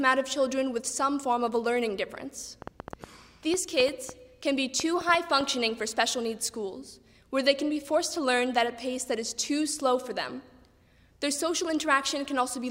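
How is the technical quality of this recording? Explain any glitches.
The recording has one clear glitch, a train of clicks. From 2.62 s to 5.42 s, about fifteen sharp, similar clicks land at roughly 5 per second, unevenly spaced, and peak around 10 dB above the surrounding sound. A burst of repeated pulses like this likely comes from electrical interference or a faulty connection or power supply. It is heard as uneven ticking over the audio. On a waveform it shows as thin spikes; on a spectrogram, as narrow vertical lines spanning the full frequency range.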